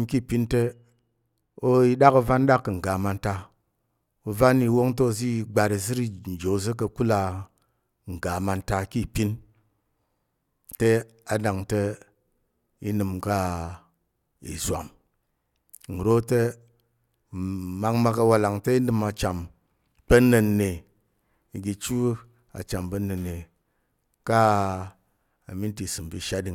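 Speech, with de-emphasis applied wrongly from 0.62 to 2.74 s: a treble-cut stage meant to undo pre-emphasis either acted on audio that had none or was applied twice, tilting the response smoothly downward to about 8 dB lower at 10 kHz than at 1 kHz. The sound turns dull and muffled, and a spectrogram shows the upper bands visibly dimmer across that stretch.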